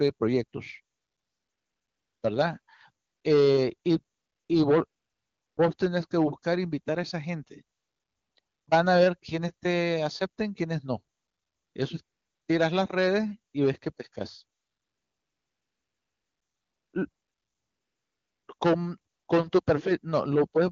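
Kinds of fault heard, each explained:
AMR comfort noise: fifteen gaps from 0.95 to 19.65 s, lasting 20 ms to 2.34 s, where speech frames stopped and smooth synthetic noise replaced the real background.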